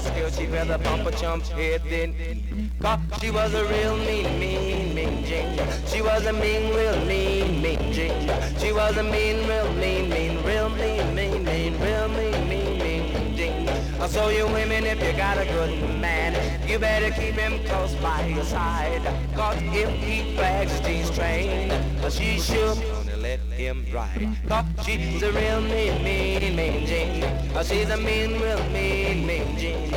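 Mains hum runs from the very start to the end of the clip, a steady low tone at 60 Hz with a few low harmonics stacked above it. The power line has leaked into the signal path, most plausibly through a ground loop or a transformer sitting close to the cabling. The hum is roughly as loud as the wanted sound itself, so it never recedes into the background and stays present under every passage.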